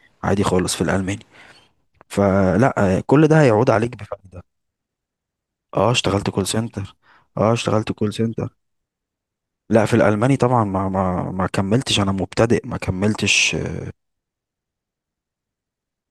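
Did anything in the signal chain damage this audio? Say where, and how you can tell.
No, nothing in the signal chain damaged this audio.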